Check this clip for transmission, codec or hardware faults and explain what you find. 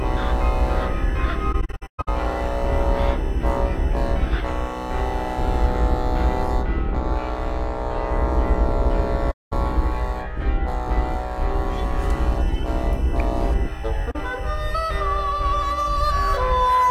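The clip has AAC frame loss with muting in three places. The first runs from 1.52 to 2.08 s, with gaps scattered across that stretch. The longest is around 150 ms. The second runs from 9.31 to 9.53 s. The third is brief, 14.11 to 14.16 s. Lost frames were decoded as silence. Overlapping windows fade each gap in and out, so the holes sound soft-edged.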